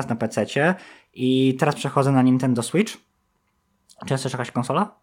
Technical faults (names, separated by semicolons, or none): none